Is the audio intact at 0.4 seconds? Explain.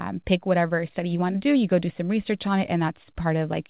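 Yes, the audio is intact at 0.4 s, with no dropout, click or distortion at that point, only the narrow telephone bandwidth of the call path, with nothing above 4 kHz.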